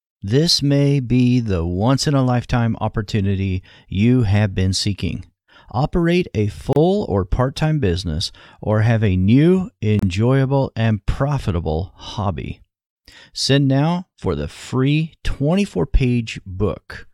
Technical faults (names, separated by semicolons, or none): gap at a join of encoded pieces